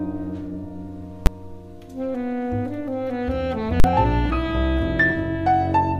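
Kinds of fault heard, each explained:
Invalid numbers at full scale: a calculation produced infinite or invalid values that were pinned to the largest positive or negative value, so the music gives way to a loud bang at 1.26 s and a 40 ms block from 3.80 to 3.84 s. The waveform shows flat rails at one extreme value, and the spectrogram shows broadband vertical stripes.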